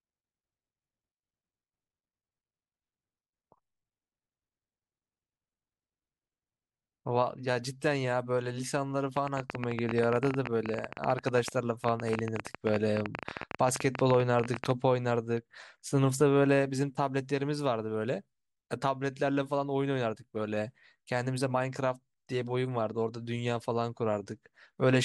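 A train of clicks from 9.17 to 14.72 s, likely interference, injects around seventy uneven pops, 14.3 per second, ticking about 15 dB above the speech.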